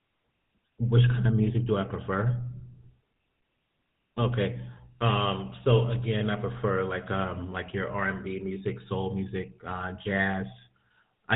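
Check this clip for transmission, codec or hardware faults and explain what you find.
The speech has passed through a GSM full-rate codec, and the damage is plainly audible throughout. The coder models the vocal tract and excites it with evenly spaced pulses, keeping only a third of the excitation samples, at a rate that fits 13 kbit/s. Nothing above 4 kHz survives, so the voice sounds muffled and carries a buzzy, gravelly roughness from start to finish.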